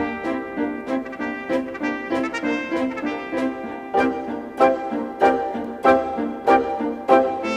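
No technical faults can be heard in the audio, so there is nothing to describe in time order.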